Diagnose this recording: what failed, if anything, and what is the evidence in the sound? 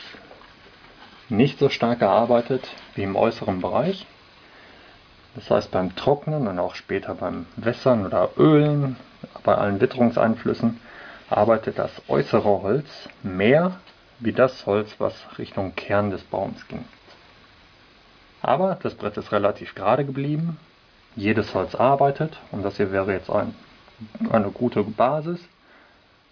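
Nothing stood out on listening, and there is no audible evidence of a failure at any stage of the chain.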